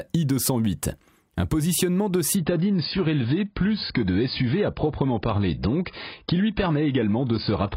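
From 2.37 s, just after "positionnement de", the speech turns dull and smeary, with nothing left above 5.2 kHz and no gap: an adaptive stream at a lower bitrate, consistent with a drop to around 16 kbit/s.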